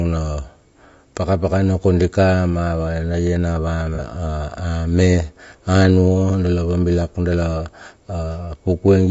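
Throughout, the speech sounds rough and grainy, with noise filling the gaps between pitch harmonics and a thin, synthetic-sounding top band. This plainly audible codec damage is most likely low-delay AAC compression, AAC-ELD, at a low bitrate around 32 kbps, where short frames resolve harmonics poorly.

From 3.95 to 4.00 s there is a brief smeared, noisy patch, consistent with AAC frame loss with concealment. The sound points to a single lost frame, roughly 30 ms, which the decoder filled by reusing the previous spectrum instead of leaving a gap.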